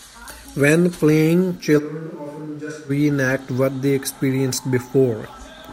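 From 1.80 s to 2.89 s, the speech suddenly turns roomy and hollow, with thinner bass. It drops around 10 dB in level. Background noise rises to roughly 25 dB below the speech. This is likely a switch to a distant microphone after the close one dropped out.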